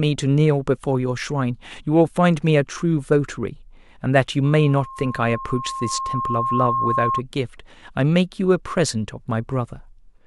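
A speech clip with loudspeaker feedback squeal from 4.44 to 7.22 s. A 1.1 kHz tone swells over roughly two seconds to match the speech. A microphone is hearing its own loudspeaker.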